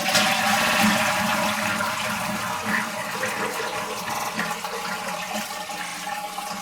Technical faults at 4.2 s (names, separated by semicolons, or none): repeated frames